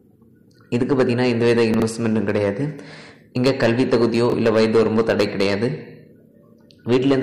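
At 1.74 to 1.82 s, and again at 4.30 to 4.34 s, the audio has chunks out of order. A 20 ms chunk arrives late and plays after material that should follow it. It is three chunks late in the first event and one in the second. Each shows up as a brief jumbled stutter. Unlike a dropout, nothing is missing and no gap opens. Unlike a repeat, no material plays twice.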